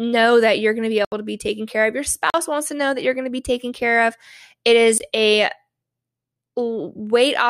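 Blocks of digital silence at 1.05 s (73 ms, after "you're going to be"), 2.30 s (40 ms) and 4.98 s (20 ms): samples zeroed without fades, so each hole cuts out and back abruptly.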